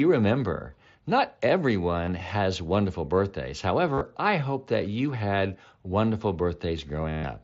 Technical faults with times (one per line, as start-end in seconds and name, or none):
2.05-2.08 concealed Bluetooth headset packet loss
3.93-4.01 concealed Bluetooth headset packet loss
7.09-7.24 concealed Bluetooth headset packet loss